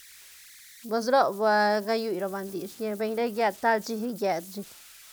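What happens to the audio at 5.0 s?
At 5.0 s, as throughout the speech, converter idle tones are present: an undithered delta-sigma converter's repeating bit patterns produce a whistle around 2 kHz, about 23 dB below the signal.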